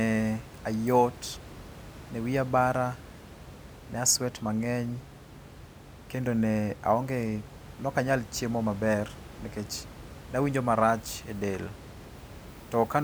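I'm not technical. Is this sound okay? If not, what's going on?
Yes, nothing is wrong with this recording.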